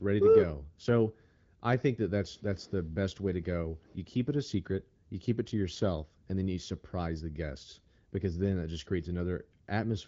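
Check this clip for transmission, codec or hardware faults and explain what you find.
No faults turn up anywhere in the recording: the speech has the bandwidth and light coding character of the AMR wideband (HD Voice) codec, at a quality consistent with a rate of around 16 kbit/s.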